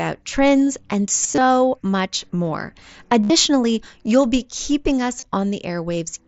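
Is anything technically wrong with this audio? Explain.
Yes, there is concealed Bluetooth headset packet loss in three places in this wideband mSBC speech, whose band stops at 8 kHz. Between 1.23 and 1.45 s, after "trends and" and before "much more", about 120 ms of audio went missing in short gaps of up to 22.5 ms. At 3.23 to 3.30 s, after "much more", 67.5 ms were lost, and at 5.20 to 5.23 s, after "you'll be keeping us", 22.5 ms. In each gap the receiver filled in with a copy of the best-matching recent stretch of waveform. Because of that fill, these spots keep a continuing repeated texture rather than falling silent or clicking as a plain dropout would.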